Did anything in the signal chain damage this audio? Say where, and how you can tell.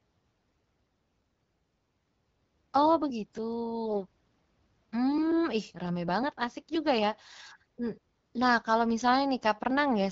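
Yes. AMR bit errors on the radio link flipped a few percent of the weakly protected frame bits, so the decoder misplaced its excitation pulses and misread pitch and gain detail. From 3.86 to 4.04 s and 7.24 to 7.34 s, the voice turns hoarse and gargly but keeps its pitch and level.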